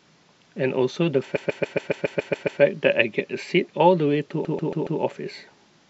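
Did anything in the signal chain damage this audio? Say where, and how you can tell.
Yes. The speech stutters twice: a 139 ms fragment loops nine extra times from 1.35 to 2.60 s, then four more from 4.44 to 4.99 s. These are repeated frames at the codec or storage stage, a block fitting six compressed frames decoded again, adding 1.25 s and 0.56 s.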